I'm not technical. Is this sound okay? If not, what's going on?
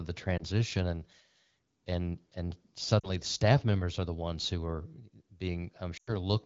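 No, there are a few small glitches from lost AMR speech frames. On a phone call, radio errors can spoil tiny slices of speech, and the phone patches each gap by stretching the last good sound while fading it out. You'll hear a quick blip near 0.37 s, a brief dropout from 2.99 to 3.10 s between "and and" and "the staff members are", and a longer drop to near silence from 5.97 to 6.10 s.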